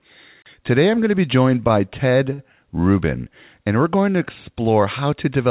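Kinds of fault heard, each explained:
Short stall from a late packet: the speech holds its last sound for about 16 ms, then 50 ms, and resumes where it paused, with nothing lost, unlike a dropout.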